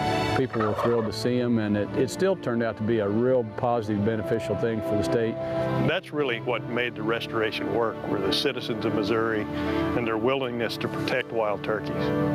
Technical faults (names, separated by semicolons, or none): gain pumping